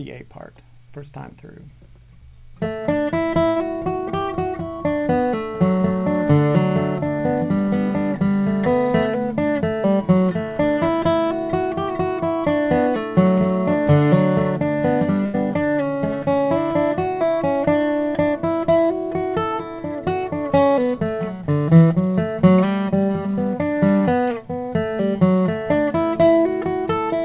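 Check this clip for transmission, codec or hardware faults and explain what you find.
The clip shows packet loss on a call path, in two forms. Its narrowband sound, with nothing above 4 kHz, fits G.711 A-law at 64 kbps.

Short concealed packet loss occurs at 1.30–1.34 s and 24.70–24.74 s. About 20 ms failed to arrive, and the receiver extrapolated the preceding sound to cover it. It sounds like a brief smear or wobble. On a spectrogram it appears as a thin, smoothed vertical strip, and the waveform shows a tiny repeated-cycle patch.

A burst of packet loss occurs at 3.48–3.58 s and 15.26–15.36 s. Roughly 80 ms went missing each time. Concealment stretched the last sound and faded it, producing a held buzz or dying hiss before the audio jumps ahead. The spectrogram shows frozen, decaying bands, and the waveform shows a tapering, repetitive stretch.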